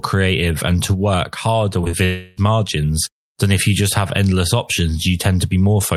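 Short concealed packet loss hits three times in quick succession: from 1.81 to 1.89 s, again from 1.85 to 1.88 s, and from 1.91 to 1.95 s. About 20 ms of speech went missing each time. The decoder patched each gap by extending the preceding sound, then blended back. The result is a brief smear and wobble. The first patch also stretches the timing by roughly 10 ms.

From 2.05 to 2.39 s, about 320 ms of speech is replaced by synthetic continuation of the last sound. It is heard as a fading buzz or hiss, with no silent stretch. This is likely a long network dropout. Speech resumes afterward without the lost portion.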